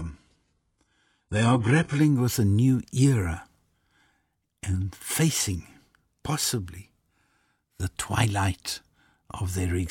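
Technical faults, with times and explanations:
0.0–2.0 s, adaptive stream starting at a low bitrate: the player opened on a lean version, so nothing sounds above 11.4 kHz and artefacts smear speech until an abrupt, gapless upgrade at "with a new era".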